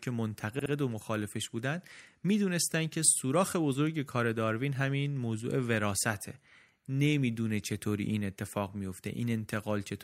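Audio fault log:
0.59–0.72 s, repeated frames: a stretch of compressed frames, consistent with two 64 ms blocks, was delivered twice more than it should have been, so the decoder replays the same brief slice of speech back to back. This is heard as a quick stutter early in the clip. Because the repeats are inserted rather than substituted, the speech runs 128 ms longer than it should, with everything after this point arriving that much later.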